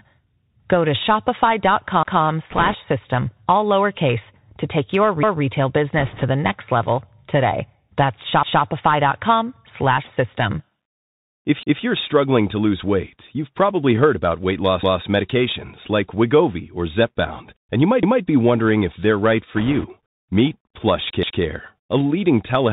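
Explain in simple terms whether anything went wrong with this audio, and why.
The whole recording went through a Bluetooth CVSD headset codec, the basic phone-call link that many wireless headsets use. It throws away everything above 4 kHz, so the speech sounds muffled and boxy, with a grainy hiss underneath and rough, scratchy s sounds.

There are also overlapping chunks. The audio was handled in pieces, and each new piece started before the last one had finished, so about 0.2 s gets played twice. You hear a short stutter at 2.03, 11.63 and 18.03 s (between "and you might" and "be wondering if they're"), and at 21.23 s, just before "a leading telehealth".

Finally, there are bit errors on a Bluetooth voice link, meaning a small share of the data, a few percent, arrived corrupted. This causes brief bursts of rushing crackle, not loud clicks, at 2.51 to 2.76 s, 5.98 to 6.24 s (just before "the next level today"), and 19.55 to 19.88 s.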